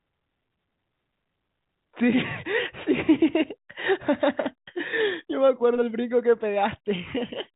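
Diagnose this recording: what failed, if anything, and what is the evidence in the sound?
Nothing failed; no faults found.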